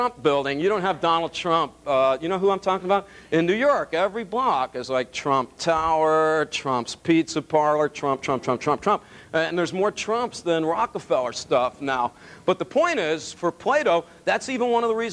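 No technical faults can be heard anywhere in this audio.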